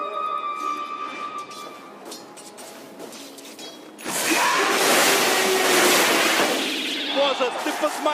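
No technical faults can be heard anywhere in the audio; the signal stays continuous and stable throughout.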